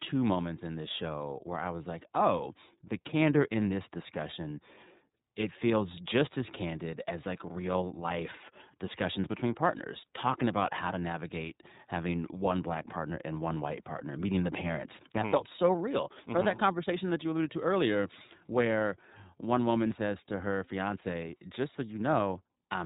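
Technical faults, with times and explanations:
Throughout, iLBC codec: the speech is confined to narrowband, with nothing above 4 kHz, and carries a plainly audible rough, slightly synthetic edge. That fits a 13.33 kbps stream coded in 30 ms frames. Each frame's excitation is rebuilt independently, so the fault is a steady coarseness rather than the watery, swirling artefacts of a transform codec.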